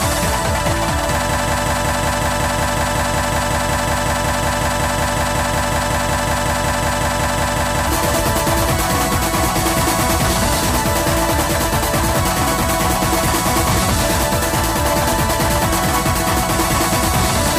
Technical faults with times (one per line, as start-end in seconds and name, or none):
1.29-7.87 broken-record loop